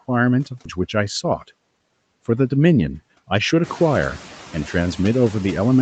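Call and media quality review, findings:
Background noise pumping, dropping away between phrases and returning under speech. Noise suppressor artifacts: per-band attenuation, about 17 dB, tracking speech frame by frame.

Abrupt forward jump at 0.65–0.67 s, no gap. Skip ahead: roughly 0.4 s of speech discarded, likely jitter buffer overflow, leaving sides joined directly.

Hurried delivery, unchanged pitch, 2.58–3.62 s. Jitter buffer speed-up: repeated pitch-period cuts at 110% rate, removing about 0.1 s of excess delay. Overlaps room-noise rise near 3.5 s.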